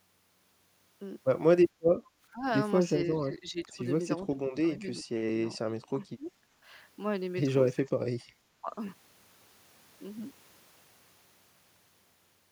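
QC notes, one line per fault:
2.31–2.45, 3.18–3.83, 4.22–4.61, 4.78–5.11, 5.61–6.39, 7.86–8.04 and 8.61–8.75 s: speech suppressed in double talk. The speech dips by about 10 to 30 dB, deepest near 7.9 s, likely because the echo canceller mistook this side's talk, overlapping the far end's sound on the loudspeaker, for echo. On the waveform the envelope is gouged, and the spectrogram shows dimmed or missing bands.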